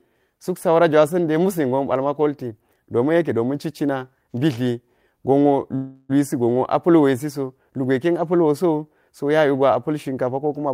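From 5.75 to 6.11 s, right after "domin citcina mbitliwi gonwo", a call audio freeze stretches the last sound into a fading buzz, likely because late packets emptied the jitter buffer. Speech resumes intact, 338 ms late. A spectrogram shows smeared, dimming horizontal bands, and the waveform shows a decaying, repetitive stretch.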